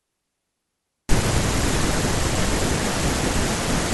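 Speech with a short burst of loose connector crackle from 2.76 to 2.84 s. A worn or dirty contact is making and breaking, chopping the signal into irregular scratchy pops. Unlike a single digital click or dropout, it is a ragged, uneven cluster lasting about 80 ms.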